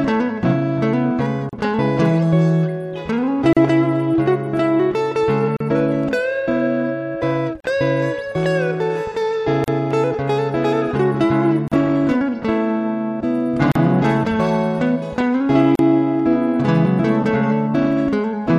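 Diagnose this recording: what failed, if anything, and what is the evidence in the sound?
Codec stage: a gap at a join of encoded pieces, roughly 37 ms long, recurs every 2.0 s at 1.49, 3.53, 5.57, 7.60, 9.64, 11.68, 13.72 and 15.75 s. Untrimmed encoder delay and last-frame padding leave thin, slightly smeared blank vertical stripes on the spectrogram and flat dropouts in the waveform.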